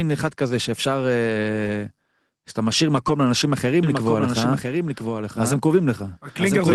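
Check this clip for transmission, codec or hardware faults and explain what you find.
Two faults are audible in this speech, which passes through an Opus call path limited to about 12 kHz.

At 1.65 s there is a lost packet rebuilt from error correction. One 20 ms packet went missing. The next packet carried a low-bitrate copy, and the decoder played it instead. There is no gap, but that instant sounds briefly rougher and noisier.

From 3.83 s to the end there is a doubled audio track. A second copy of the speech runs about one second behind, roughly 5 dB quieter. It starts abruptly, with no decay or room colour. The cause is likely a slower second capture path mixed in.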